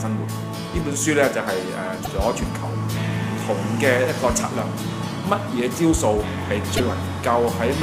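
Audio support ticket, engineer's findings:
Two short glitches, 2.03–2.07 s and 6.76–6.80 s, each about 40 ms. Damaged data in the compressed stream: the decoder misreads corrupted frames, loses sync and recovers at the next frame header.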